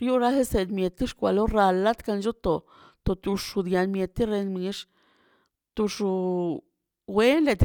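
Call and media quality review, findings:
No audible faults found in this speech recording.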